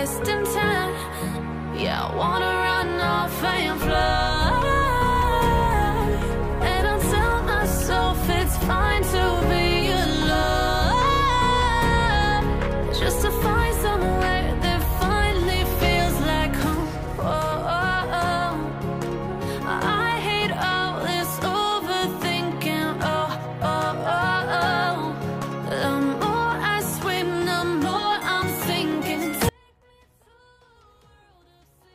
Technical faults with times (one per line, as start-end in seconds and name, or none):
29.49-31.94 audio dropout to a faint residue